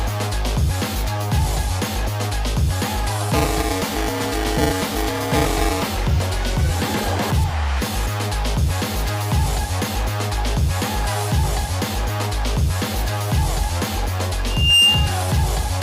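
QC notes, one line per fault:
3.33–5.87 s, buffer tearing: write and read pointers cross every period, splicing in a slice of audio a few milliseconds old; 375 Hz rattle fits a 128-sample buffer.
14.47–15.21 s, loudspeaker feedback squeal: the mic-to-speaker loop exceeds unity gain at 2.8 kHz; the tone swells over about a third of a second to about 10 dB above the signal.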